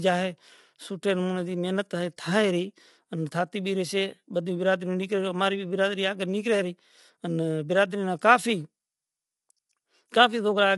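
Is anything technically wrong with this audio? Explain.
Yes. Low-delay AAC compression runs throughout: the speech sounds rough and grainy, with noise filling the gaps between harmonics and nothing above about 11.6 kHz. This is likely AAC-ELD at a low rate, around 32 kbps, where very short frames resolve pitch harmonics poorly.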